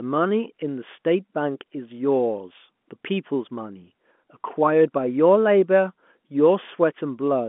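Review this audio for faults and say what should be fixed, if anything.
Nothing here needs fixing; no faults are audible.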